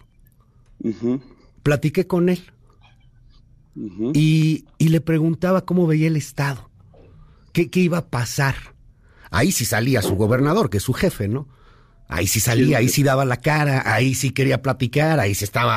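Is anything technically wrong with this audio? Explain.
No, nothing technically wrong turns up anywhere in this speech recording, so there's nothing here to flag.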